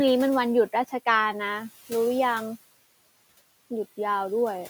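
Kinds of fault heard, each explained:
Noise suppressor artifacts: A noise suppressor runs throughout, judging frame by frame which frequency bands hold steady noise and turning those bands down, here by about 17 dB. The room noise, sitting about 20 dB below the speech, is pulled down hard in the gaps between words and then comes back up underneath them whenever speech is present, so the background pumps in and out with the talking instead of staying level.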